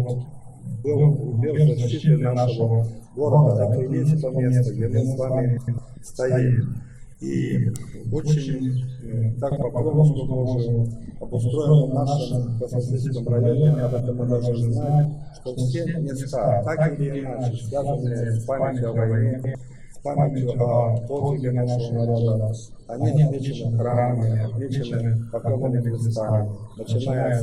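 The audio has three short garbled flutters at 5.57–5.78 s, 9.51–9.62 s and 19.34–19.55 s. These are frames out of order: two adjacent blocks of coded audio were decoded in swapped sequence, so the halves of each stretch play back exchanged. The first and last swaps involve blocks of about 104.5 ms, which fits runs of four frames, and the middle one uses 52.2 ms blocks. Unlike a dropout or a repeated frame, nothing is missing or doubled and the timing after each glitch stays intact. From 13.63 to 15.05 s a hard, raspy GSM phone buzz appears at about 217 Hz, roughly 27 dB below the programme. It is dense with harmonics and has no relation to the sound itself. A nearby 2G phone is bursting radio pulses that the audio circuitry rectifies. Its brief, come-and-go presence points to a data transfer rather than a call. The higher pitch and gritty pulse train set it apart from smooth 50 or 60 Hz mains hum.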